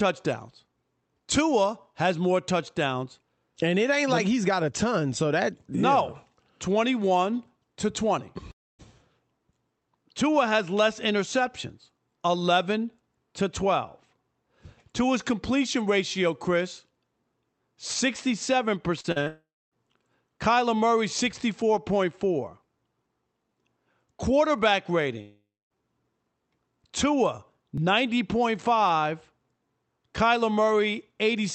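At 8.51 to 8.81 s there is a long network dropout. About 0.28 s of sound is missing, likely because packets stopped arriving. The last sound is stretched into a fading buzz that sinks into near-silence before the audio resumes further on. That decay into quiet marks it as a dropout rather than a brief patch.

At 19.01, 19.12 and 19.24 s, short concealed packet loss gives three quick smears, each lasting about 20 to 40 ms. The receiver extrapolates the sound across each gap and blends back in without any silence, so each one is heard as a wobble rather than a hole.

The last of those runs straight into a second long network dropout from 19.28 to 19.74 s. It loses about 0.44 s, likely to a network stall, and again fades through a synthetic tail into quiet.

At 24.59 s a dropped buffer (overrun) produces a small forward jump, skipping roughly 5 ms. The two sides of the gap butt together directly, with no silence and no fill. 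That separates it from the concealed losses, and it likely comes from the capture side not reading its samples in time.

A third long network dropout runs from 25.21 to 25.83 s. Around half a second is lost, likely to interrupted delivery, with the same fading fill settling into quiet before the sound returns.

A second dropped buffer (overrun) at 27.78 s repeats the skip, again roughly 5 ms, likely for the same cause. Across the whole clip the Opus call path limits the top end to about 8 kHz.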